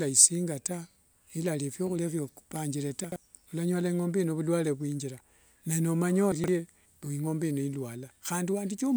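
At 3.04 to 3.16 s and again at 6.32 to 6.48 s, the speech jumps briefly and sounds jumbled: chunks out of order. A 40 ms block plays late, after the two and then three blocks meant to follow it, leaving three hard joins each time.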